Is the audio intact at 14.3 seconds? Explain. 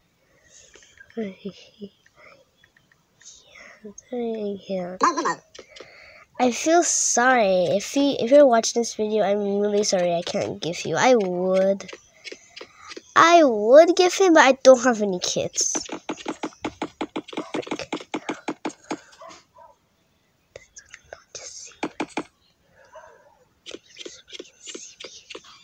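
Yes, at 14.3 s the audio runs on cleanly, with no dropout, click, distortion or other break in the signal.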